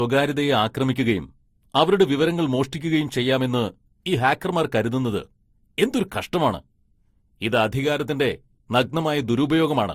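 Across the whole speech clip there's a smeary, doubled coding texture, likely transcoding between lossy codecs, a Vorbis-like pass then Opus, each adding artefacts; nothing above 20.2 kHz.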